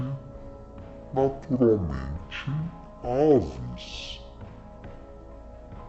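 Interleaved left and right samples are being read as a single channel, so this stereo read as mono fault runs throughout the audio, halving the playback speed and dropping pitch an octave (12 semitones), with a fainter mirror image in the upper spectrum.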